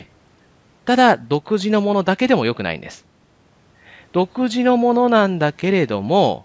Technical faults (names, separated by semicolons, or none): none